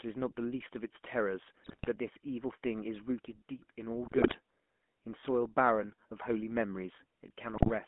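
Throughout, the GSM full-rate codec rebuilds the speech from a vocal-tract model and a sparse pulse excitation, which fits a 13 kbps rate, giving a buzzy, gravelly roughness within a narrow telephone band. From 1.62 to 1.97 s, 4.04 to 4.35 s and 7.54 to 7.70 s, GSM bit errors corrupt the decoder's filter, pitch and gain values, so the speech breaks into squawks, pops and gargling.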